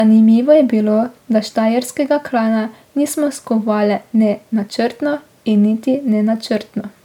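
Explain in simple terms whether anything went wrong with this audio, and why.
Generation loss affects the whole speech clip. It sounds swirly, hollow and smeared, with blurred starts. The likely cause is repeated MP3 re-encoding, several times over.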